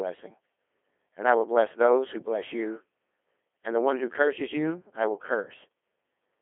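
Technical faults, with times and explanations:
Throughout, Codec 2 vocoder: the speech sounds robotic and buzzy, with a narrow telephone-like band of roughly 300 Hz to 3.4 kHz and nothing above 3.5 kHz. The vocoder discards the real waveform and transmits only pitch, voicing, energy and a coarse spectral envelope, then rebuilds the speech from sine waves. The heavy damage points to a very low rate, consistent with Codec 2 at about 2.4 kbit/s.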